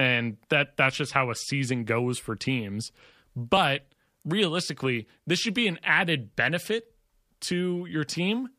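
No technical faults can be heard in this speech recording.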